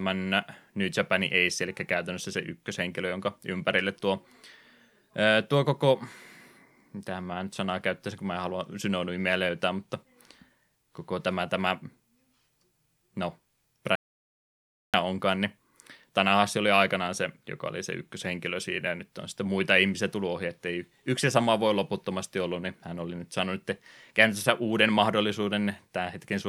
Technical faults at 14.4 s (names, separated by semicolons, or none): audio dropout to silence